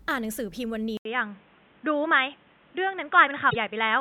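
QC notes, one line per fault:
0.97 s to end, input switched to a poorer device: the input likely moved to a narrower-band device, leaving a gap of about 80 ms at the switch. After it, nothing reaches above 3.8 kHz, so the speech turns dull and boxy. A new background noise sits roughly 35 dB under the signal, and the loudness stays about the same.
3.47–3.56 s, damaged data in a compressed stream: corrupted frames in the encoded stream threw the decoder out of sync, so it misread data until it found the next valid frame header. The result is a brief disturbance of about 90 ms.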